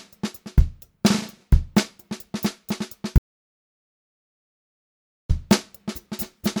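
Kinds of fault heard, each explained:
Audio dropout to silence: the sound cuts off abruptly at 3.18 s and returns at 5.30 s, leaving about 2.1 s of dead digital silence with no room tone, likely from lost input. The waveform shows a flat line there and the spectrogram an empty band.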